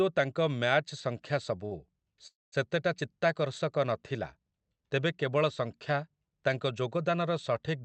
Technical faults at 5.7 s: none

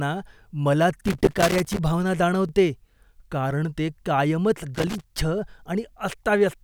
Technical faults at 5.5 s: overlapping chunks

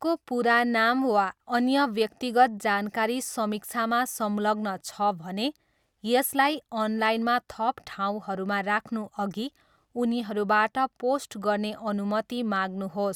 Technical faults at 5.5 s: none

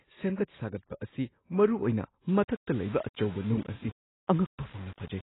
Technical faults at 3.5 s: AAC compression; low bit depth without dither

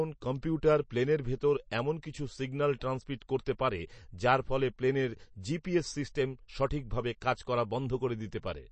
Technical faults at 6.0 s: MP3 compression

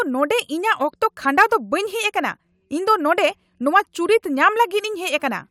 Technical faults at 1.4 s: none

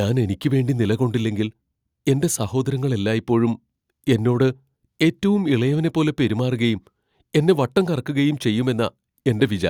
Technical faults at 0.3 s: none

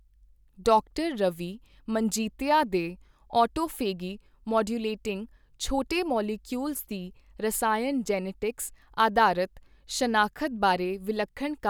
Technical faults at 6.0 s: none

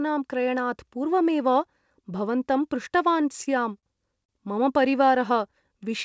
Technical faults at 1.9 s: none

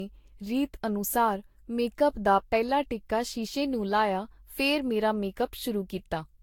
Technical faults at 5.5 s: generation loss

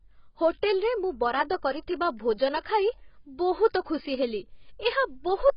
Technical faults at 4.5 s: AAC compression

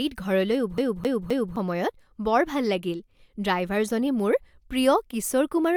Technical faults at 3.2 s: none

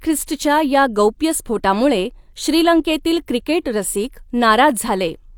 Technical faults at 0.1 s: none

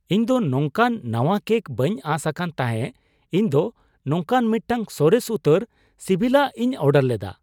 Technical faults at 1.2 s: none

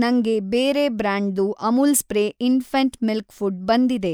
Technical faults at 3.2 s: none

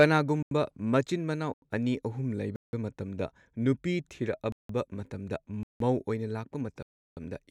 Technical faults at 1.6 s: block of digital silence

